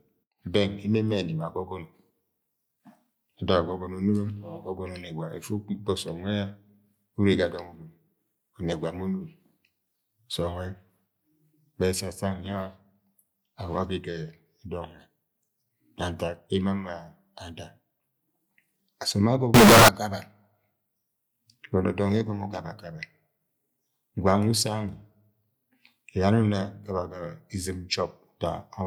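From 19.54 to 19.88 s, the speech becomes a harsh, square-edged blast at an almost fixed, high level. This is likely float read as integer, which fits 32-bit float samples decoded as integers.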